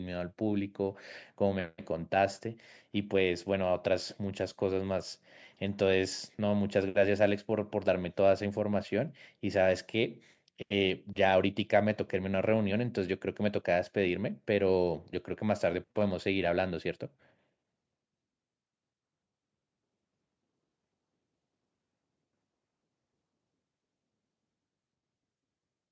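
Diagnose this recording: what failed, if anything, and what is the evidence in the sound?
Nothing failed here: the speech has just been through a call's microphone processing, which trims away the deepest bass and leaves nothing above 8 kHz, and that's simply how that path normally sounds.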